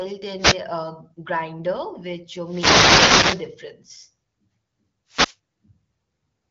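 Wireless microphone noise hits occur at 0.38 to 0.59 s, at 2.42 to 3.52 s just after "grinder which", and at 5.08 to 5.36 s. In each, the analogue FM radio link fades as reflected paths cancel the signal, so receiver noise rises, heard as a swish of static. The middle hit, over a second long, is the longest.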